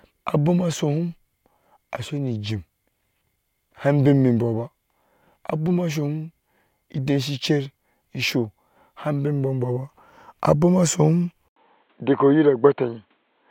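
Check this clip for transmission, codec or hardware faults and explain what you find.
One fault, in the speech's last two seconds. From 11.48 s to the end, the input was likely switched to a poorer device. After a silence of 80 ms at the switch, the new capture path passes nothing above 4.2 kHz, so the voice turns dull and boxy. It also comes in about 5 dB quieter, and a fresh background noise appears roughly 40 dB below the speech, with a character different from what came before.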